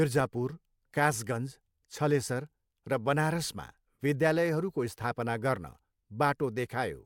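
Nothing here jumps out as a technical fault; the speech comes through steadily with no dropouts, clicks, glitches or odd jumps in level anywhere along the way.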